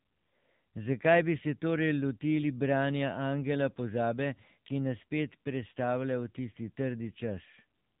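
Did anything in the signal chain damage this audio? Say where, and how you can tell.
Yes, and it's at the codec stage: the whole clip has been through the AMR narrowband mobile codec. Nothing gets past about 3.7 kHz from start to finish, which is the telephone-band ceiling of 8 kHz sampling. The speech also has that buzzy, synthetic edge all the way through, which fits one of AMR-NB's middle modes, somewhere near 8 kbps, where a few pulses per 5 ms subframe drive the vocal-tract model and can't carry much detail.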